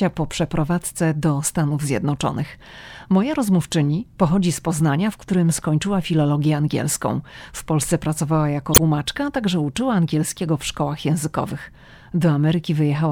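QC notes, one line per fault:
8.71–8.79 s, damaged data in a compressed stream: a short glitch, a chirp, squawk, click or short hole, cuts into the speech for about 80 ms. Part of the compressed data at this point is corrupt. The decoder cannot read those frames correctly. It outputs garbled values and loses its place in the stream. It then hunts for the next valid frame header before normal decoding resumes. That brief burst of misread data is what produces the glitch.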